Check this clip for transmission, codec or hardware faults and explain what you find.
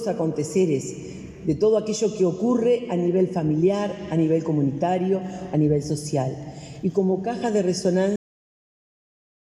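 One fault is present: a cut-off end. At 8.16 s the audio stops abruptly mid-sound and drops straight to digital silence, which holds for the remaining 1.3 s. There is no decay or fade; the waveform simply ends. This points to the final buffers never being written to the file or passed to playback, so the tail of the material was lost before capture finished rather than being faded or trimmed.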